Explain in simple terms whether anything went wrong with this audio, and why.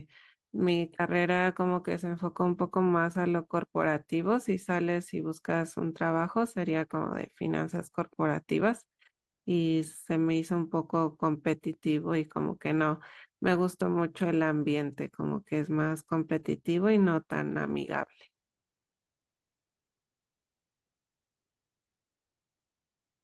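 Five single packets of this speech were lost in transit. Each was replaced by a rough backup copy (a lost packet rebuilt from error correction), so there's no gap, only a brief rougher, noisier moment at 9.69, 13.53, 14.61, 16.39 and 17.69 s.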